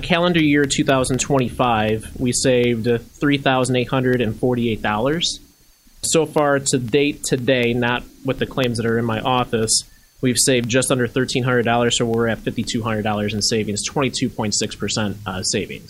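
From 0.14 s to 15.64 s, periodic USB or driver dropouts every 0.25 s blank a fraction of a millisecond to silence, producing regular ticks wherever signal is present.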